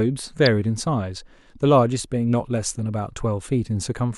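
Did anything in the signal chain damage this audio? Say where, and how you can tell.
Yes, at the codec stage: a corrupt frame decoded at 0.46 s. The speech is interrupted by a brief, fairly loud glitch lasting about one frame. Flipped bits in that compressed frame were decoded anyway, so misread gains and codes put energy at the wrong frequencies.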